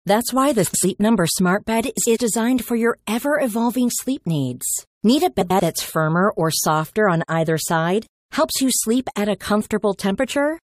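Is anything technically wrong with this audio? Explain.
Yes, this speech clip has three spots where frames play out of order, at 0.65–0.84 s, 1.97–2.17 s and 5.40–5.60 s. In each, two neighbouring blocks of about 93 ms got swapped, so you hear a garbled flutter, though nothing's actually missing.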